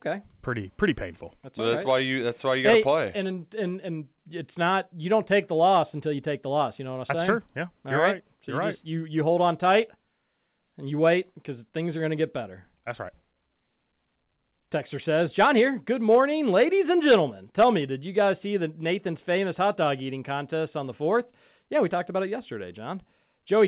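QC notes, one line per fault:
No faults found; the speech comes through the call path with nothing above 4 kHz, which fits a G.711 A-law link at 64 kbps.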